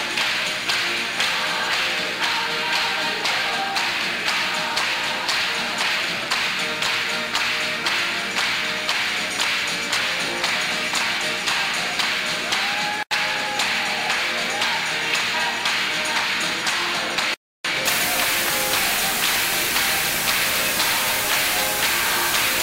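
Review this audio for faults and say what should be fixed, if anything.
From 17.86 s to the end at 22.62 s there's low bit depth with dither: the sound was requantised to about 3 bits with dither added first, so the rounding error turns into a steady, even hiss roughly as loud as the signal itself, with no gritty distortion. To prevent it, keep the full bit depth through every processing and export stage, and only reduce word length once, at the final output.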